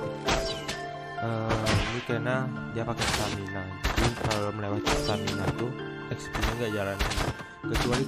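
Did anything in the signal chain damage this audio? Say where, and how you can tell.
Yes. In the analogue wiring, the 217-per-second transmit bursts of a nearby 2G phone on a call were rectified into GSM phone buzz from 6.41 s to 7.25 s. It is a steady, raspy 217 Hz tone with many harmonics, about 20 dB below the signal and unrelated to it.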